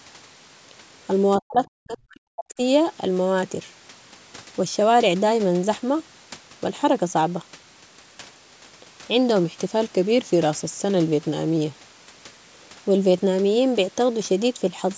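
From 1.38 to 2.59 s the speech is pulled down in uneven bites, about a second of it in total, with the deepest cuts near 40 dB. This is speech suppressed in double talk. The echo canceller was likely confused by both sides talking at once and attenuated the near-end voice along with the echo. It sounds like the talker fading and dropping out in fragments. On a waveform the envelope collapses in chunks. A spectrogram shows broken, dimmed bands.

At 9.44 s the voice abruptly slows by about 6% and drops about a semitone (105 cents), holding there until 11.78 s before snapping back. This is a drift correction step, likely clock-matching software jumping the playback rate to rebalance its buffer. Speed and pitch sag together, so the talker sounds briefly sluggish and detuned. A spectrogram shows the harmonic lines stepping down as a block and then jumping back up. The waveform's syllables stretch slightly over that span.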